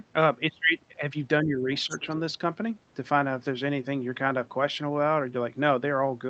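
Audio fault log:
1.44–1.69 s and 1.86–2.09 s, speech suppressed in double talk: The echo canceller likely faced both sides talking at once and could not tell the near talker from the loudspeaker echo, so it pulled the whole microphone signal down. The talker's level sinks by up to about 10 dB in two short stretches, roughly a third of a second and then a brief dip, so the speech sounds momentarily pushed back before recovering.
1.76–2.16 s, other side's voice leaking through: The far side's voice, played from the talker's loudspeaker, was likely not fully cancelled before the microphone signal went out, so a residue of it rides along with the local speech. It sits about 15 dB below the talker, a faint second voice in the background for under half a second, overlapping the second suppression dip.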